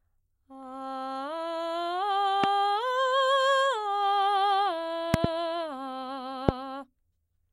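Sharp loud pops punch through the music three times: a single one from 2.44 to 2.46 s, a quick double from 5.14 to 5.27 s, and a single one from 6.49 to 6.51 s. Each jumps something like 20 to 25 dB above the music, which carries on underneath. The likely cause is a sudden voltage step or spike, from a plug, switch, static discharge or driver glitch, reaching the signal path and being shaped by the circuitry after it.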